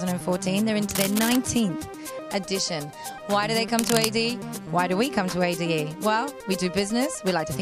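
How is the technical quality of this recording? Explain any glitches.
The recording has two bursts of cable scratch noise, at 0.91 to 1.36 s and 3.77 to 4.05 s. A moved cable or connector likely had rapidly changing contact resistance, adding dense, uneven scratching nearly as loud as the sound itself.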